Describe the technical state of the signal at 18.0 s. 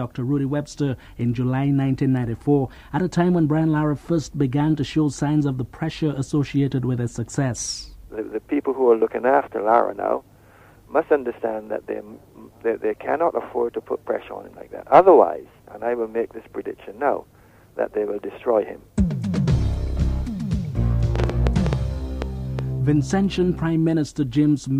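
The signal at 18.0 s is intact, with no audible fault at that point.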